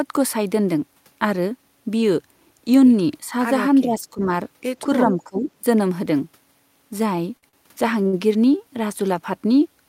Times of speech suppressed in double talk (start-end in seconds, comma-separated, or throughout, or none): 3.29-3.33, 3.81-4.30, 5.04-5.48